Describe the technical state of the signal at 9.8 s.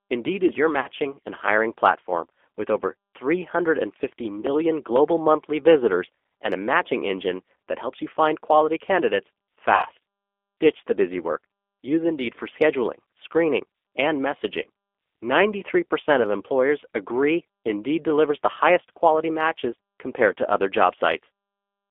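At 9.8 s the audio sits inside a VoIP packet loss concealed by the speech codec, running from 9.75 to 9.86 s just after "you find quality candidates". About 80 ms of signal is missing, which fits four lost 20 ms packets. The decoder extends its last pitch and vocal-tract filter, so the sound smears into a fading buzzy tone or coloured noise, with weak, distorted recovery afterwards.

Underneath is the G.729 codec damage present throughout: an 8 kbit/s G.729A coder rebuilds the signal from a filter, a pitch predictor and sparse pulses. The line band is 300 Hz to 3.5 kHz, so the sound is thin and plainly rough and synthetic at this moment too.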